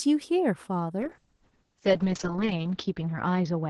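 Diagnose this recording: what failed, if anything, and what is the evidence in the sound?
Call bitrate drop from 1.0 s to the end, at the codec stage. The speech turns rough and watery, and its top falls from 12 kHz to 8 kHz. That fits Opus going from about 32 kbps to 6 kbps, bottoming out for 1.28 s.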